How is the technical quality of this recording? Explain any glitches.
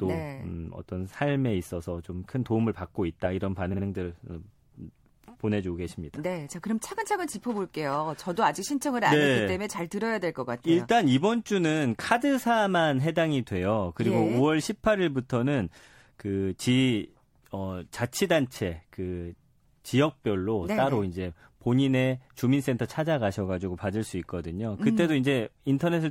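One glitch is audible: repeated frames between 3.72 and 3.83 s. A 52.2 ms block of the compressed speech plays two extra times, consistent with a short run of frames being sent again. The decoder replays it, adding 104.5 ms to the clip. The result is a brief stutter.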